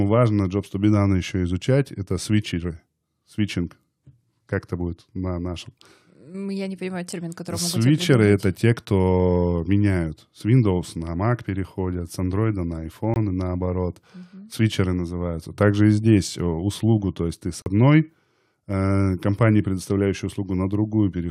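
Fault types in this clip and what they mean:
Block of digital silence: the program probably failed to fill its output buffer in time, so samples became zeros. The speech cuts out abruptly: a 20 ms gap at 13.14 s before "и наоборот", and a 40 ms hole at 17.62 s after "то есть ты с".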